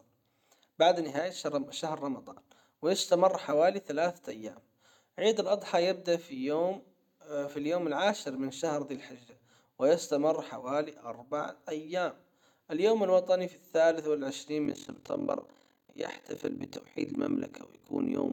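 Frames rejoined with a non-constant overlap gain cause overlap-add ripple from 14.65 s, after "الوطني في الثالث والعشرين": level pumping about 60 dB near 40 Hz, a harsh, rough flutter.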